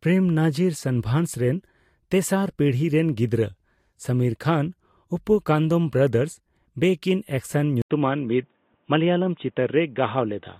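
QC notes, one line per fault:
7.82–10.59 s, input switched to a poorer device: after an 80 ms gap the speech turns dull and boxy to the end, with nothing above 3.8 kHz and a faint new noise floor far below the speech, while loudness stays about the same. The likely cause is a change to a narrower-band microphone or headset profile. A spectrogram shows a short blank column, then a hard ceiling at 3.8 kHz. The waveform shows a brief flat gap and no step in amplitude.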